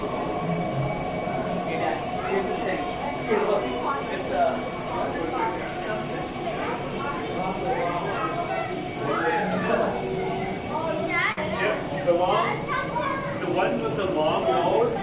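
At 11.32 to 11.40 s there is a short stall from a late packet. The next packet had not arrived when it was due, so the jitter buffer ran dry and the receiver held the last sound for about 51 ms until the data turned up, then continued from the same point. Nothing is lost, but the sound hangs briefly with a slight buzz or dip, and the playout delay grows by the same 51 ms.

From 14.23 to 14.96 s there is a jitter buffer speed-up. Having built up more buffered audio than it wants, the receiver trimmed short pitch-period slices repeatedly, removing roughly 50 ms in total. Playback runs at 106% speed with the pitch unchanged, so this stretch sounds slightly rushed. The whole clip passes through a call path with nothing above 4 kHz, which points to G.711 mu-law at 64 kbps.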